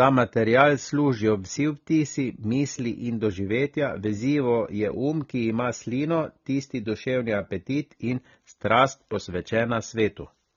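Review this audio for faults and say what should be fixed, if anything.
AAC compression damage runs through the whole speech clip. Nothing sits above 18.8 kHz. The codec damage is plainly audible, dull and smeared. The likely cause is AAC-LC encoding at a low bitrate, which fits about 24 kbps, where the spectrum is quantised too coarsely. To prevent it, encode at a higher bitrate or keep a lossless master for delivery.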